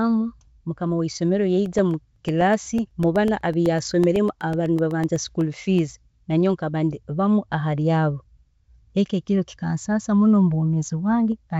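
Just after "mukama weisomero", from 1.66 to 5.91 s, periodic USB or driver dropouts blank about a millisecond every 0.125 s, producing regular ticks over the speech.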